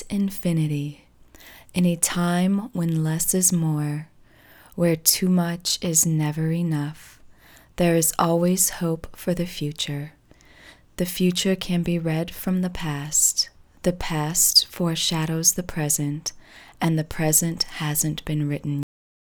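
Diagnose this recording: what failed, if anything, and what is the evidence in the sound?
The final buffers of the recording were never written to storage, a cut-off end at the buffer or file-write stage. At 18.83 s the sound stops mid-event with no natural decay, dropping straight to digital silence that lasts for the remaining half second.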